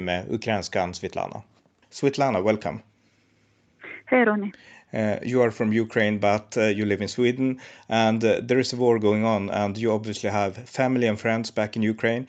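Nothing here stands out as a technical fault, just speech carried over an ordinary call connection whose coding keeps the sound to a band topping out around 8 kHz, as you'd expect from that kind of path.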